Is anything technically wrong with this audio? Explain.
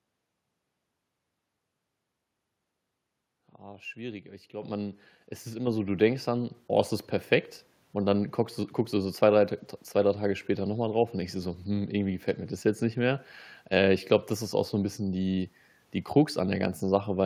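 Yes. The microphone volume is stepped up three times, at 4.62 s, 5.67 s and 6.69 s, by about 8, 5 and 2 dB. Each time the input gain jumps at once, so the speech and the background noise get louder together. A smooth gain-control ramp would rise gradually instead.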